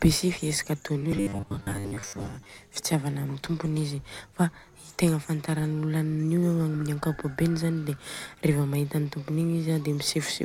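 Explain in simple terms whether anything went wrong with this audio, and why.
Something did go wrong, from 1.12 to 2.59 s: the speech turns into a stiff, metallic buzz pitched at 100 Hz, while the syllables still come through roughly. That is robotic sound from repeated short buffers, likely caused by audio arriving too slowly, so the player kept replaying the last 10 ms or so, with about half the sound made of repeats. Unlike simple dropouts, there are no silent gaps, only this steady mechanical tone.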